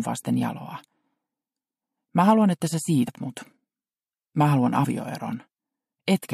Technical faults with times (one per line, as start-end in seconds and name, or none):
3.07 compressed frames skipped
4.83-4.85 compressed frames skipped